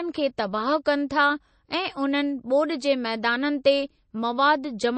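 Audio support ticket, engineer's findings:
Throughout: watery, swirly speech, metallic chirp on s sounds, nothing above 8.3 kHz. Likely MP3 compression. The bit-starved encoder, consistent with about 32 kbps, zeroes weak bands, which flicker frame to frame. The swirl distinguishes it from a plain low-pass filter's clean cutoff.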